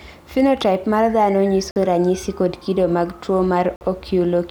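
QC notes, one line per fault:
1.71–1.76 s and 3.76–3.81 s, gap between chunks: two 50 ms holes of silence, spaced about 2 s apart. The speech seems to be delivered in 2 s chunks with dead air inserted at each join, so nothing is lost but the flow is cut.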